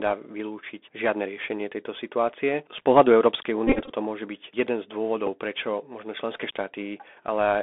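The whole clip runs through a Bluetooth CVSD headset codec, which fits a 64 kbps link. The line is squeezed to roughly 250 Hz to 3.6 kHz, s sounds come out scratchy, louder high parts smear as the adaptive step can't keep up, and a grainy hiss sits under the speech.

From 3.67 to 3.91 s, just before "môže byť jeden", there's a Bluetooth headset packet repeated fault. Lost packets were swapped for re-decoded copies of the previous one, about 131 ms of them scattered through that stretch in runs of up to about 20 ms, so it buzzes near 267 Hz. A shorter repeat at 5.27 to 5.29 s, 7.5 ms lost, is just a brief tick.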